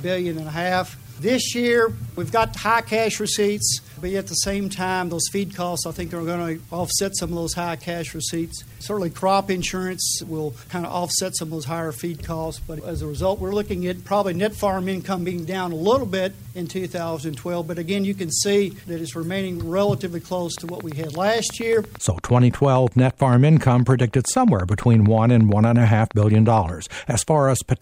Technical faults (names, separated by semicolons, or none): train of clicks